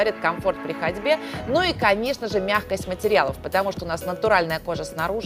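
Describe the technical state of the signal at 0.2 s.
The signal at 0.2 s is intact, with no technical fault present at that moment.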